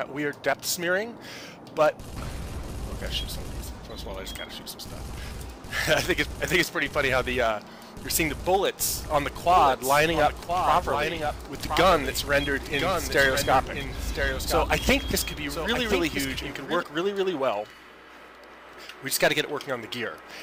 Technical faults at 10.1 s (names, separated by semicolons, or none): doubled audio track